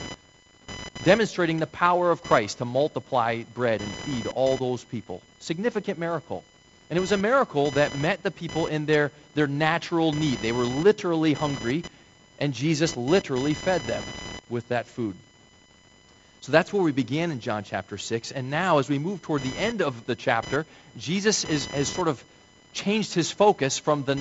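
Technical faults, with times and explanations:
Throughout, computer activity noise: a chirping, whining buzz pulsing at around 1 kHz, roughly 15 dB below the speech, that follows the computer's workload rather than the speech, because changing processor and graphics load currents disturb the audio circuit's shared ground.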